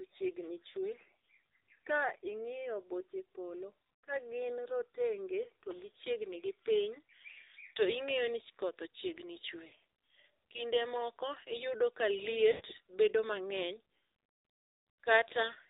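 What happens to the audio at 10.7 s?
At 10.7 s the speech carries the AMR narrowband mobile codec, present throughout: nothing passes above 4 kHz, and the low-bit pulse excitation gives a buzzy, synthetic tone consistent with a 7.4 kbps mode.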